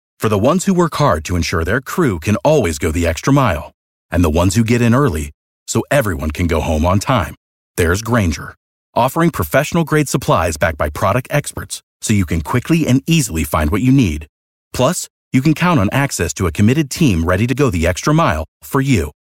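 It's a speech clip with audio missing between chunks: tiny skips of about 20 ms at 2.64 s after "ensure their crew can", 11.57 s after "supplies backed by product" and 17.53 s after "committed team ready to", likely from 3-second chunk boundaries dropping samples.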